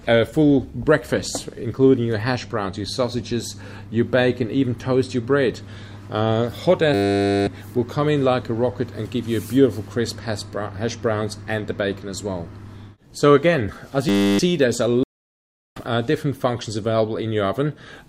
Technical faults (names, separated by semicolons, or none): system hang loop; stream reconnect